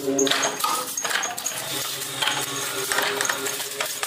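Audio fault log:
No audible faults were found anywhere in this recording.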